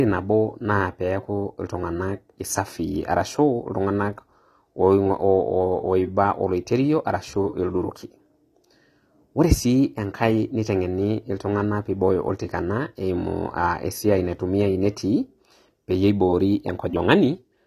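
The speech was likely squeezed through AAC compression at a low rate, which fits AAC-LC at about 32 kbps. Starved of bits, the encoder drops the top of the spectrum and leaves gaps, so the whole clip sounds dull and smeared, with sibilants turning fizzy and warbling.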